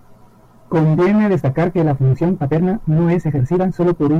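Speech clip with a time-stretched section from 1.26 s to the end, where the pace jumps to about 1.71 times faster at unchanged pitch, sounding rushed, likely from software dropping short segments to shorten the audio.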